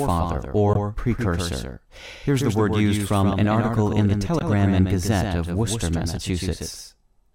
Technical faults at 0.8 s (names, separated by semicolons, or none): doubled audio track; damaged data in a compressed stream